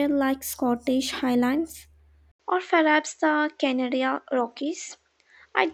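At 2.32 s the speech stops for about 80 ms, then returns with a different character until the end. Above 7.8 kHz there is now nothing, so the top end sounds duller and boxy. A faint new background noise appears, roughly 45 dB below the speech. Loudness stays about the same. The likely cause is an input switched to a poorer device mid-recording, with a narrower band, its own tone and its own noise.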